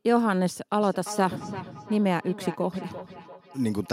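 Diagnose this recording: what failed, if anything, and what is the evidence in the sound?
The call processing failed: two devices on the same call share a room, so one plays back what the other's microphone sent, and that microphone picks it up again. Each device's echo canceller removes only its own playback, so the loop stays open. This produces feedback echo between two devices from 0.81 s to the end at 3.92 s: the speech returns at roughly 300 ms intervals, peaking about 14 dB below the direct speech.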